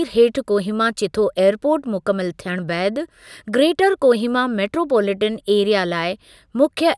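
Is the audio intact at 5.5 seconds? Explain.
Yes, at 5.5 seconds the speech plays through intact, with no audible fault at that moment.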